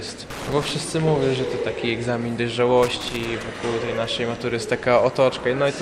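Loose connector crackle appears from 0.30 to 0.71 s and again from 2.83 to 3.48 s. A worn or dirty contact is repeatedly losing and regaining connection, chopping the signal into fragments, heard as irregular bursts of scratchy crackle over the sound.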